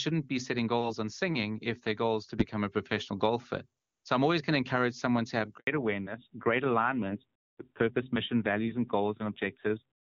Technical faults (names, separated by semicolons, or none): handover gap; fallback to narrowband